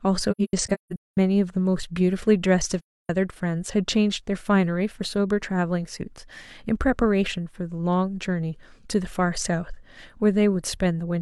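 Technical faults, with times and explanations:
0.31–1.17 s, AAC frame loss with muting: several lost stretches, totalling about 0.6 s and the longest around a fifth of a second, punch soft-edged holes into the speech. The decoder zeroed the missing spectra, so overlapping windows fade the sound out and back in.
2.80–3.09 s, AAC frame loss with muting: one continuous gap of about 0.3 s, which fits a run of roughly seven lost frames. The zeroed frames are smoothed at each edge by the overlapping windows, giving a gentle fade to silence and back.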